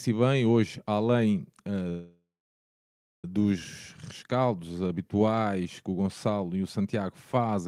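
From 1.89 to 3.25 s the speech stalls in a call audio freeze: the last sound is drawn out as a short fading buzz, then nearly a second of silence, before the speech picks up exactly where it stopped. The likely cause is packets held up in transit, leaving the jitter buffer empty. Unlike packet loss, nothing is cut out; about 1.34 s of gap is inserted, so everything afterwards arrives that much later.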